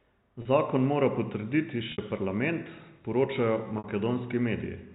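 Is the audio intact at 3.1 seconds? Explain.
Yes, the speech at 3.1 seconds is intact, with nothing disrupting it at that moment beyond the narrow telephone band of its G.711 telephone coding.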